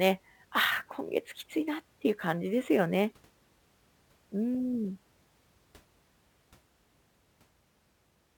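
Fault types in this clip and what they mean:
Sample clock jitter: The converter's clock wanders, so each sample lands slightly early or late. Here the timing error is around 7 microseconds. That adds a hiss roughly 25 dB below the speech throughout. It grows on loud, bright sounds and fades in pauses.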